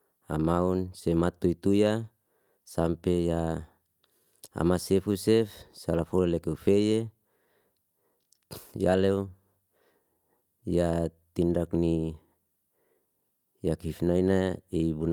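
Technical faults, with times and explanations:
Throughout: clock drift between sender and receiver. The sender's clock runs about 2% slow, so the receiver's buffer keeps draining and timing hiccups recur unevenly.
0.40–14.78 s: repeated timing corrections. Short pieces are repeated to fill the gap, adding around 300 ms and slowing playback to 98%, heard as unsteady tempo.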